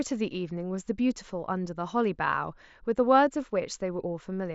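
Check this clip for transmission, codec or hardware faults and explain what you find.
No faults detected here.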